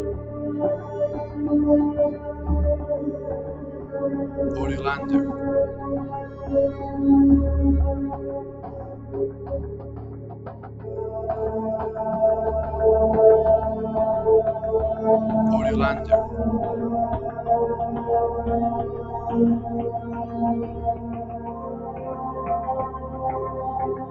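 A noise suppressor applied to music or sounds stays active across the whole audio, treating held tones, ambience and decaying tails as noise and pulling them down by a swing of around 10 dB, so the sound pumps and thins while sharp attacks survive. Sound cut by the noise suppressor is heard at 0.17 to 4.38 s, 5.74 to 6.87 s, 8.16 to 10.87 s and 19.03 s to the end, where sustained or fading passages sink by up to about 6 to 7 dB for stretches of about 1.5 s, 0.5 s and 2 s in the first three spans, with the content confined below 8 kHz by the call path.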